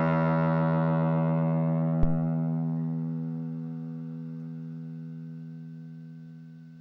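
At 2.03 s a phantom power thump hits. A supply switched on or off on the live input and the step leaked through the coupling capacitors. The deep thump peaks at about -12 dBFS, decays in 43 ms and ends by 2.22 s.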